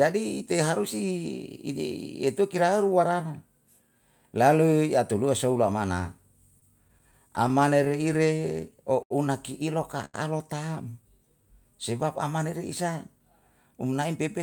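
From 6.59 s to 9.12 s the speech shows repeated stalls (stutter). The receiver's jitter buffer kept running dry because packets arrived late or more slowly than they were played out. Sixteen times in that stretch playback paused and the last sound was extended until fresh audio was available. The fill adds up to 235 ms, about 9 percent of the span, with the longest hold at 77 ms. Nothing is dropped, but the delivery drags and judders across those two and a half seconds.

At 10.05 s to 10.16 s there is a short stall from a late packet. A single packet was not on hand when due, the buffer emptied, and the receiver held the preceding sound for 85 ms before resuming from exactly where it left off. No audio is lost. The result is one sound sustained unnaturally long, with a faint buzz or dip in level, and the overall delay grows by the same 85 ms.

From 11.02 s to 11.76 s, ending just before "sebab amana", a jitter buffer slow-down occurs. 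The buffer needed more reserve, so the receiver repeated individual pitch periods and small pieces of pauses many times in succession, adding 62 ms. Playback runs at 92 percent speed with the pitch unchanged. Sounds are audibly drawn out, and the repeated cycles can give a slight warble.

From 13.63 s to 14.40 s the opposite correction appears as a jitter buffer speed-up. The buffer held more audio than its target, so the receiver trimmed short segments of one or a few pitch periods in quick succession, removing about 70 ms in total. Speech runs at 108 percent speed at the same pitch, which makes this closing stretch sound hurried.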